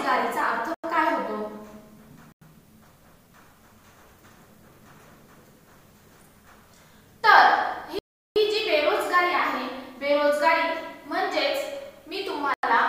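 Blocks of digital silence fall at 0.74 to 0.84 s, 2.32 to 2.42 s, 7.99 to 8.36 s and 12.54 to 12.63 s. Each time, likely because the output buffer wasn't filled in time, the sound drops straight to silence and returns with no fade. Three holes last about 93 ms, which fits a 4096-sample buffer. The 372 ms gap, four buffers' worth, is a short hole.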